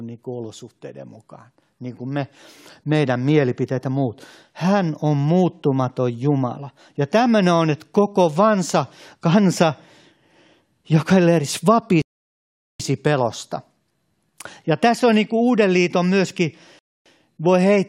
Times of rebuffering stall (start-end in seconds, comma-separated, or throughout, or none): 12.02-12.80, 16.79-17.06